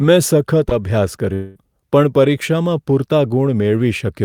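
At 0.69 s the speech is hit by a phantom power thump that lasts until about 0.91 s. A supply was switched on a live input, and the sudden voltage step passed through the coupling capacitors as a deep, low-frequency knock. Its main energy dies away in about 51 ms. On a waveform it shows as a sharp offset swing with a quick exponential return. On a spectrogram it is a dark vertical smear packed into the lowest bands.

From 1.33 s to 1.57 s the speech gives way to a smeared, buzzy continuation of the preceding sound. It fills the whole 220 ms gap with no true silence, and the speech then resumes with that stretch missing. The likely cause is a long network dropout, where the receiver, getting no packets, kept synthesising from the last audio it had. A spectrogram shows blurred, repetitive harmonic bands with no new detail. The waveform looks strangely regular before the real signal returns.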